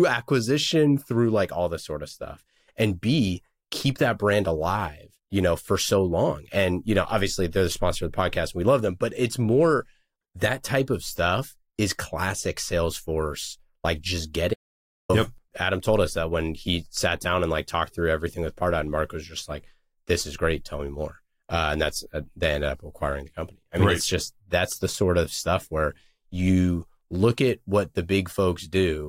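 Speech that cuts to dead silence after "like just" from 14.54 to 15.09 s, an audio dropout to silence losing 555 ms, likely from the input briefly disconnecting or muting.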